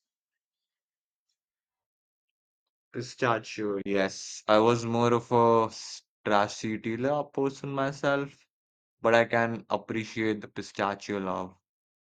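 At 3.82 s the speech cuts out briefly, returning at 3.86 s. This is a digital broadcast dropout. The receiver muted after failing to decode, which fits a single lost frame of about 32 ms. An 8 ms fade softens the edges. That stretch of audio is gone.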